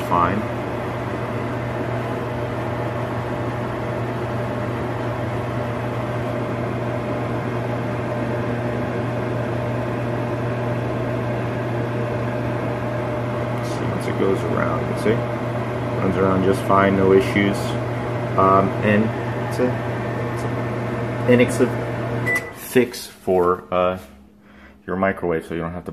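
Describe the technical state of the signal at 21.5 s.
At 21.48 s, damaged data in the compressed stream makes the decoder lose sync and hunt for the next frame, producing a brief glitch.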